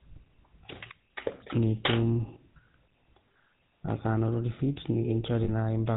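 It's a speech clip run through the GSM full-rate codec for its whole length. Nothing above 4 kHz survives, and the voice has that buzzy, gravelly edge from the vocal-tract model being driven by a sparse, regular pulse excitation, which fits a 13 kbps codec. There are also two spots of lost GSM frames, at 3.86–3.89 s and 5.44–5.50 s. In each, the decoder repeats the last good frame's settings, so the audio hangs briefly as a rough metallic ring, roughly 20 ms in the first case and 40 ms in the second, before normal decoding picks up again.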